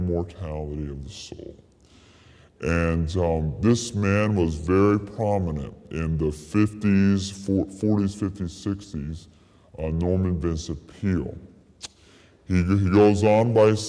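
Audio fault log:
Throughout, wrong sample rate: the whole clip runs at 0.689 times normal speed and sits 6.45 semitones lower. The samples are clocked out slower than they were captured, with no conversion, so speed and pitch drop together. This fits 32 kHz material played at 22 kHz.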